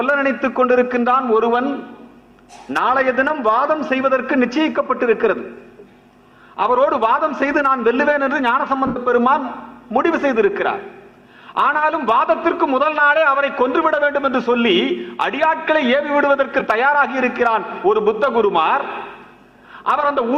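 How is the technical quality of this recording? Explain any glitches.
The recording has two dropouts from lost LE Audio frames, plus light lossy compression.

Lost LE Audio frames occur at 8.87 to 8.97 s, about 90 ms, and at 16.59 to 16.61 s, about 15 ms. The LC3 decoder refills each gap with the last spectrum under random signs. Tones smear into noise. The longer gap fades toward silence.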